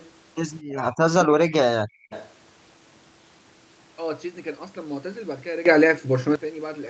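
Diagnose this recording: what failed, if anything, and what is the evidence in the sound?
Echo leak, likely from the far end's echo canceller in call processing: a faint delayed copy about 243 ms behind, around 0.0 to 0.1 s, then louder (about -20 dB) at 2.1 to 2.33 s.

Speech suppressed in double talk, also call processing: the voice sinks by roughly 35 dB across 0.67 to 1.53 s and briefly at 1.97 s, likely the canceller ducking both talkers.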